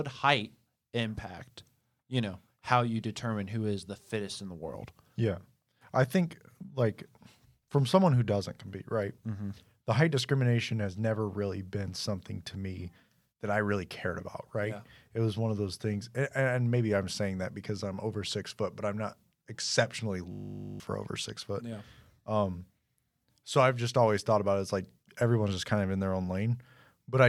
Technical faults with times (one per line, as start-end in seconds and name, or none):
20.32-20.80 system hang loop